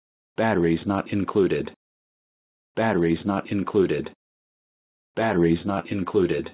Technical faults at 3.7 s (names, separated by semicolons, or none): none